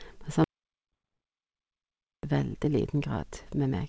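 At 0.44 s the sound cuts out to an audio dropout to silence that lasts until 2.23 s. The gap is silent, with no room tone or hiss underneath, and the sound resumes mid-flow rather than fading back. That dead floor is what separates it from a quiet pause in the recording. The likely cause is the input being lost, through a disconnected device, a failed link or a mute, while the recorder kept writing silence.

Inside that stretch, at about 0.92 to 0.94 s, there is a skip ahead. Roughly 0.7 s of audio was discarded, most likely when a jitter buffer that had overfilled dumped its backlog. No filler was inserted, so the two sides of the jump are butted straight together. Unlike the dropout, a skip leaves no silent hole. The timeline just jumps forward, and the delay drops by about the same 0.7 s.

From 2.94 to 3.80 s a jitter buffer speed-up runs the speech at about 110% of its normal rate. 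The receiver trimmed many short pitch-period-sized slices, about a tenth of a second in all, to shrink its excess delay. The pitch stays put while the delivery sounds hurried. Resampling would have raised the pitch, and a skip would have produced one abrupt jump, so the steady, even rush marks it out. Throughout, the G.722 call path leaves nothing above 8 kHz.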